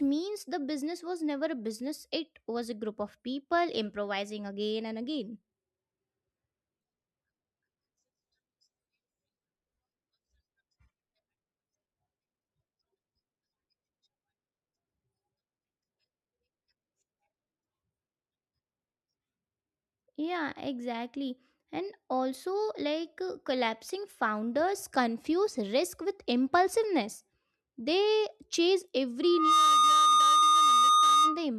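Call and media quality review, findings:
Loudspeaker feedback squeal, 29.22 to 31.46 s: a single 1.2 kHz tone swells up in about a third of a second and sits roughly 10 dB over the speech. Mic is hearing its own speaker, and the loop gain at 1.2 kHz is over unity.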